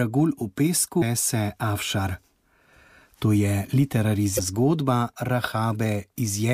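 At 0.98–1.03 s and 4.35–4.40 s, damaged data in the compressed stream makes the decoder lose sync, heard as a brief chirp, squawk, click or short hole.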